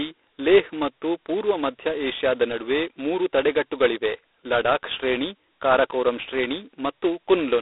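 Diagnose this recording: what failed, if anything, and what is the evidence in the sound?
The codec stage failed: G.726 ADPCM across the whole clip. The speech is band-limited to roughly 300 Hz to 3.7 kHz, with nothing above 3.8 kHz, and carries a harsh, rasping hiss that rises and falls with speech level. That heavy damage fits the 16 kbit/s mode, where too few bits per sample encode the prediction error. A spectrogram shows a hard ceiling near 3.8 kHz and a grainy noise floor tracking each syllable's energy.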